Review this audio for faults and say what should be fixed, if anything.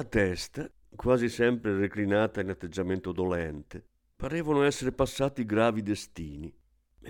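CD scratch ticks show up between about 4.99 and 6.15 s: five short ticks, roughly four a second, none lasting more than a couple of milliseconds. That regular spacing points to a scratch or blemish coming round once per disc revolution and wiping out more data than error correction could rebuild, so the player patched or muted those samples and left tiny clicks in the speech. To avoid it, re-rip from a clean disc using a secure, re-reading extraction mode.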